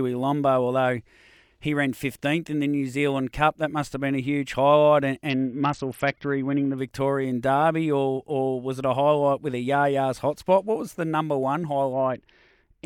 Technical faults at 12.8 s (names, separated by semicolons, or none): Bluetooth SBC bit pool drop